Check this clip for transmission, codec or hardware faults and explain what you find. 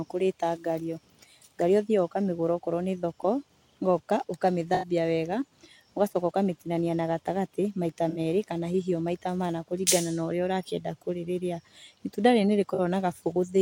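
Three brief smeared, noisy or phasey patches interrupt the speech, at 4.74–4.88 s (85 ms), 8.09–8.19 s (64 ms) and 12.74–12.80 s (43 ms). This is AAC frame loss with concealment. Each gap fits a few missing frames, which the decoder papered over by extrapolating the last good spectrum.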